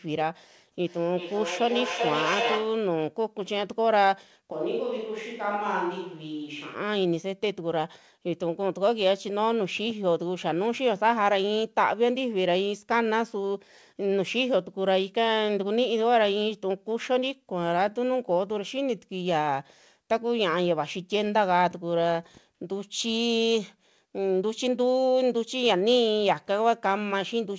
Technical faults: feedback echo between two devices; switch to a distant microphone

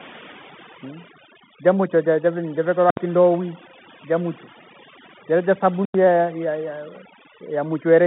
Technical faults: overdone noise removal; Bluetooth CVSD headset codec; underrun with held sample

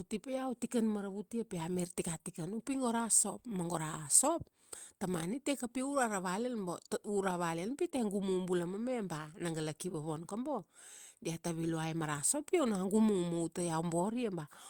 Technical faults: short concealed packet loss

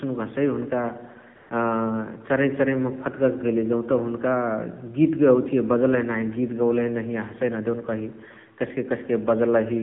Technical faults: AMR narrowband mobile codec; AMR comfort noise

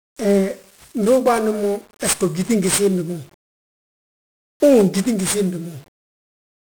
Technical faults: 1-bit DFPWM compression

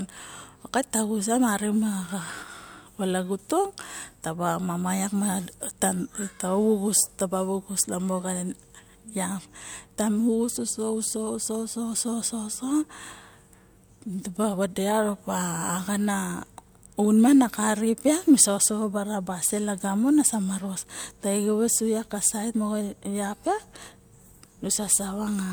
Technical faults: none

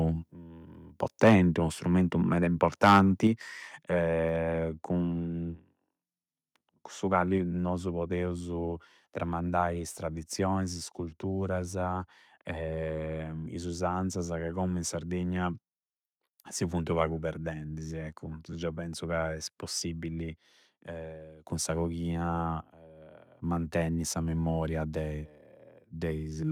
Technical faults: microphone overload; microphone volume stepped down

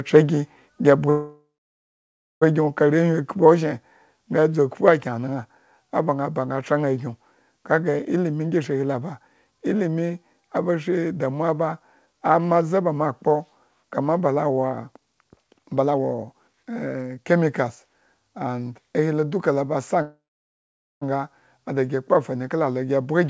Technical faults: microphone overload; call audio freeze; jitter buffer speed-up

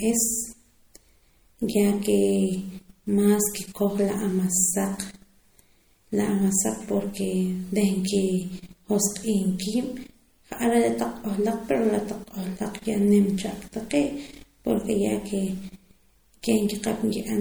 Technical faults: MP3 compression

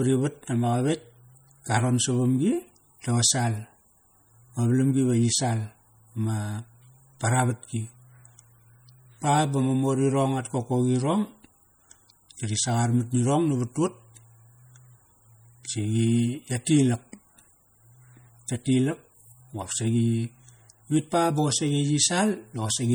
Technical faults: MP3 compression

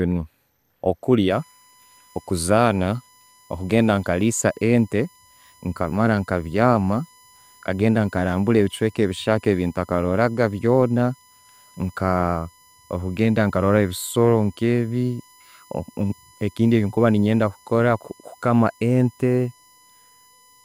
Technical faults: USB whine

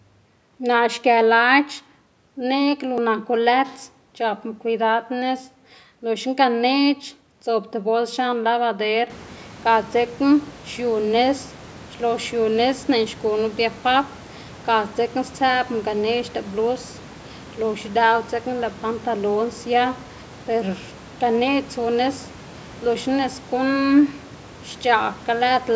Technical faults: none

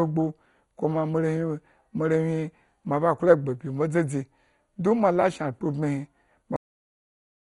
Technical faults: MP2 compression; cut-off end

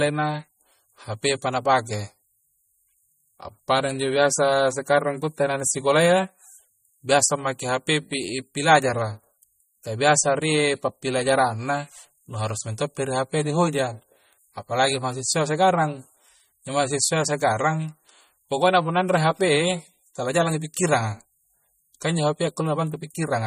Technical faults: MP3 compression

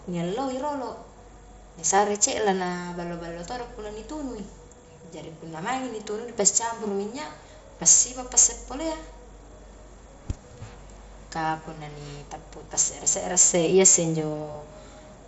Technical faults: concealed Bluetooth headset packet loss

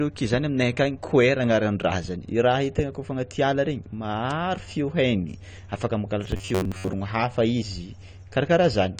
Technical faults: AAC compression; bit error spike; robotic sound from repeated short buffers

